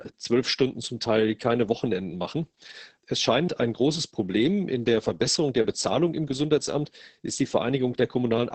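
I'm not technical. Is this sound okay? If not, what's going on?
No. Opus voice compression affects the whole clip: squeezed hard to save data, the speech loses its crisp top end and sounds muffled, hoarse and slightly robotic.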